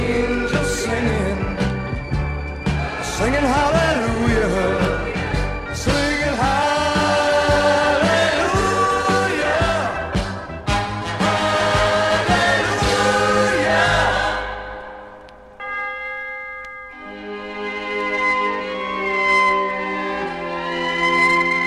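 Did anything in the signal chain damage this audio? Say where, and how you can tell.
Yes. Two isolated clicks, at 4.85 s and 6.63 s, point to dropped samples, most likely in the driver or buffer stage, where a fraction of a millisecond of the stream went missing each time. Because the waveform jumps straight from one value to a later one, each gap is heard as a single sharp tick and shows as a thin vertical line across the spectrum. The loss is far too brief to remove any sound.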